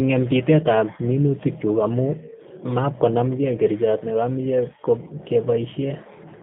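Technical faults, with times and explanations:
Throughout, G.729 codec: speech is band-limited to 150 Hz to 3.6 kHz and plainly rough and synthetic, consistent with 8 kbit/s G.729A rebuilding it from a vocal-tract filter and sparse pulses.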